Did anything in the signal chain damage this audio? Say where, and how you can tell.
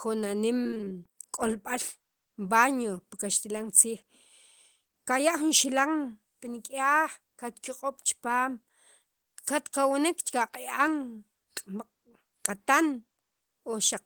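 Yes. Between 0.63 and 0.94 s the speech breaks up with repeated packet loss (robotic sound), a network-stage fault. There are eight short holes, the longest about 24 ms. The receiver patched roughly 130 ms by extending the last sound, and a further 160 ms is simply missing, so about 45% of that stretch is concealed. The result is choppy, with pieces missing. On a spectrogram this shows as smeared, frozen harmonic bands alternating with abrupt gaps, and the waveform shows repeated cycles and sudden dropouts.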